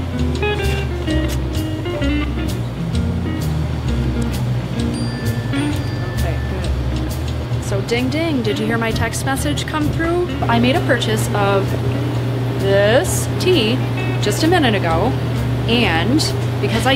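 No technical faults can be heard anywhere in the recording; the signal stays steady and intact throughout.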